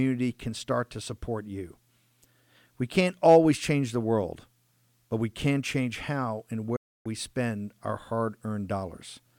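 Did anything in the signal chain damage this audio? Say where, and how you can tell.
Yes. A digital broadcast dropout at the reception and decoding stage mutes the speech from 6.76 s to 7.06 s, right after "can change how and", and it resumes mid-phrase with "spend our hard". The sound fades out in about 8 ms, which is too quick to be natural, leaving roughly 0.3 s of silence. That gap fits around nine consecutive corrupted frames. The decoder rejected them and muted until valid frames returned, so the audio sent during that span is gone.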